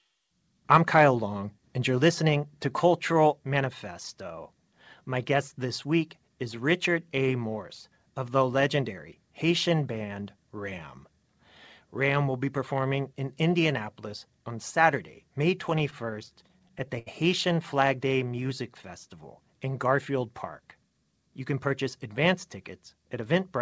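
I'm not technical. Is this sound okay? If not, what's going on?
No, there are several audible problems in this speech recording.

From 0.72 to 1.01 s there is microphone overload. The loudest moments have a harsh, crackly edge because the microphone was likely set too sensitive. The strongest peaks went past the highest level the recording could capture, and their tops were sliced flat. Only a small fraction of the sound is affected, but that flattening is what produces the gritty distortion.

At 1.98 s the microphone volume is stepped down. The voice and the background both get slightly quieter all at once, shortly after that distorted stretch. The call software likely lowered the microphone's input level in a single step, reacting to the earlier overload. It is a small, sudden drop rather than a gradual fade, so it sounds like someone nudged a volume knob.

Between 15.70 and 17.08 s there are repeated stalls (stutter). 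The audio snags 13 times in quick succession. Each time, the incoming data arrived late, so the receiving end briefly stretched out the last sound to cover the wait. Together these fills add about 206 ms, and the longest single hold is 78 ms. Nothing is actually lost, but the speech drags and hiccups through this stretch.

From 18.09 to 18.72 s there is a jitter buffer slow-down. The speech plays at about 90% of normal speed while keeping its usual pitch, so sounds come out slightly drawn out. The receiving end was running short of stored audio. It rebuilt a reserve by repeating tiny slices of the sound over and over, which added about 72 ms here.

From 20.83 to 21.67 s there is a jitter buffer speed-up, the opposite correction. The speech runs at about 108% of normal speed, again at the same pitch, and sounds a little rushed. The receiver had built up more waiting audio than it wanted. 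It caught up by cutting out many very short slices, roughly 70 ms in total.

Throughout the clip, the call connection passes nothing above 8 kHz, so the very top of the sound is absent.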